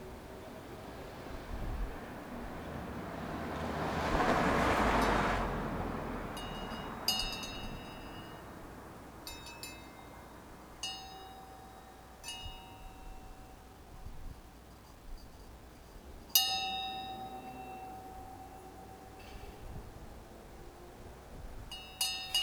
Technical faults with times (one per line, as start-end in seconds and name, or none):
0.00-22.42 low bit depth without dither